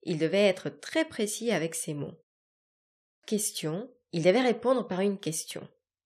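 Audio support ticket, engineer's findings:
Clipped start after a pause at 2.76 s. Speech resumes abruptly at 3.23 s on "question il devait répondre", its onset missing. About 0.47 s swallowed after a 0.61 s silence. The output device slept in the gap and was slow to wake and relock.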